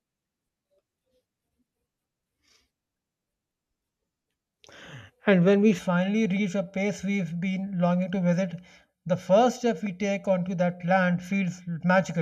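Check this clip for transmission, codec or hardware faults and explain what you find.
One fault is present: channel delay (comb filtering), from 5.79 s to the end. One channel arrives about 1.5 ms late and the pair is summed to mono, cutting notches from around 400 Hz upward at even spacing, so the speech turns hollow and phasey. Unlike a sweeping flanger or warbling codec, the notches stay fixed.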